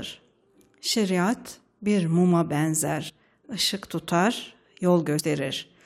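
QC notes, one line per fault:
3.08–3.10 s and 5.19–5.21 s: damaged data in a compressed stream. Each is a brief glitch lasting about 20 ms, the first between "bir muma" and "ışık tutar". Corrupted bytes there make the decoder misread frames, lose sync and hunt for the next valid header.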